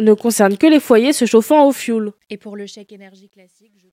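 From 1.6 s, just after "que les foyers se", the speech fading out grows gritty, and from 3.0 s to the end it is at its worst. This is truncation distortion on a fade: the gain stage keeps too few bits without dither, which fits 11-bit output, so the fading waveform collapses into coarse square steps.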